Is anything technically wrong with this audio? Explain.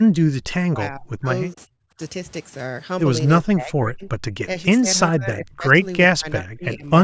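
Yes. The speech is repeatedly suppressed in double talk. It dips at 0.04–0.42, 0.7–1.29, 1.54–1.99, 3.43–4.09, 4.28–4.33, 4.8–4.87, 5.1–5.74 and 6.08–6.9 s. The level drops by up to about 40 dB, fading or cutting out in pieces. The likely cause is an echo canceller that could not separate the talker from loudspeaker echo during overlapping talk, so it turned both down.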